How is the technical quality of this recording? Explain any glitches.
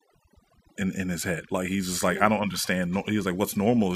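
The technical quality is compromised by overdone noise removal, present across the whole clip. The noise reduction acts too aggressively, pulling individual frequency bands down whenever they sit close to its noise estimate. Low-level parts of the speech vanish with them, while the background drops and breaks up into twinkling specks.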